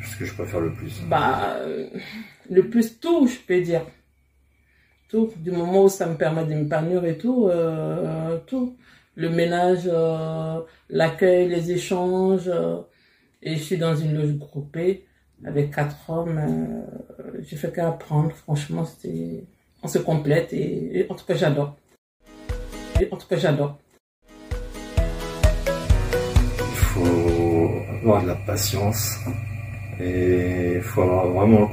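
From 22.99 to 25.01 s, about two seconds of audio plays again after a small blip at the jump back: a stream segment repeated, as the player queued the same segment twice.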